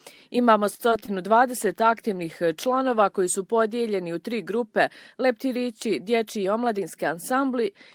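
From 0.75 to 1.10 s the sound turns choppy, with four short holes, the longest about 40 ms. This is repeated packet loss: each gap is patched by stretching the last sound, covering about 30% of the stretch, with roughly 60 ms simply missing.

Between 1.58 and 3.86 s the audio grows rough and muffled, as if the top end were shaved off, worst for about 1.5 s. That fits a call bitrate drop from about 32 to 18 kbps, forcing coarser Opus coding and a narrower bandwidth.

From 6.36 to 6.79 s the sound runs hurried, about 7% faster, while its pitch stays put. This is a jitter buffer speed-up: the receiver trimmed many short pitch-period slices, around 40 ms in total, to shed delay that had built up.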